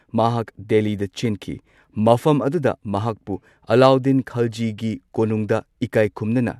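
No technical faults can be heard anywhere in this recording.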